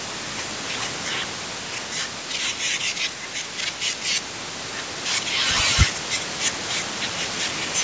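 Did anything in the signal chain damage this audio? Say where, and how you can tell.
No, nothing in the signal chain damaged this audio; it only passed through normal call microphone processing, with content ending at 8 kHz.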